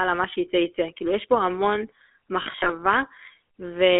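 Throughout, the speech has a buzzy, gravelly roughness and a narrow band from 300 Hz to 3.5 kHz. This is the GSM full-rate codec, whose coarse pulse excitation fits a 13 kbps stream.

From 2.42 to 2.73 s, brief rough, metallic rings replace the speech in short bursts. These are lost GSM frames, scattered over about a quarter second, consistent with six 20 ms frames concealed by repeating the last good frame.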